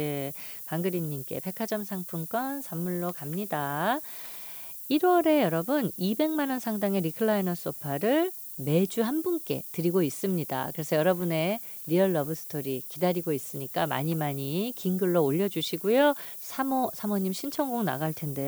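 Low bit depth with noise shaping runs through all of this speech recording: samples are rounded to 7 bits and the rounding error is pushed upward in frequency, giving a steady, thin hiss about 15 dB under the speech that rises steeply toward the top.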